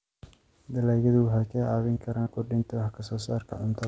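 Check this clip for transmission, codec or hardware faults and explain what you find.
There are two dropouts that got patched over, a classic case of short concealed packet loss, heard through a call path with nothing above 8 kHz, which fits a wideband codec like G.722. The first is around 1.94 to 1.98 s and the second around 2.22 to 2.28 s. About 20 ms and then 40 ms of audio arrived too late for the decoder, so the receiver extended what came just before, pitched or noisy as appropriate, and faded back in. Both come across as a quick smear or wobble.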